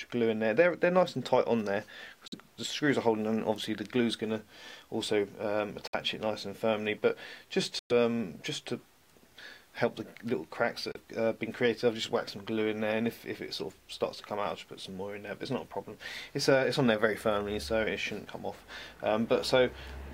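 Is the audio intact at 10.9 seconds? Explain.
No. From 10.92 to 10.97 s the sound drops to about 32 ms of silence, then resumes; this is likely a Bluetooth stall, where the headphone buffer ran dry waiting for resent packets.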